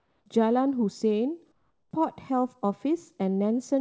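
Speech, with comfort noise in place of the background at 0 to 0.26 s and 1.52 to 1.91 s: steady, featureless, about 3 and 5 dB quieter, likely from discontinuous transmission.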